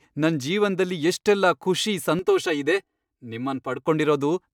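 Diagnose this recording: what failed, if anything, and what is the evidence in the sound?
Channel delay (comb filtering) in the driver or buffer stage. From 2.19 to 3.87 s the speech turns hollow and phasey. One channel runs late by roughly 3 ms before the mono sum, so matching content cancels in evenly spaced notches, the lowest near 200 Hz.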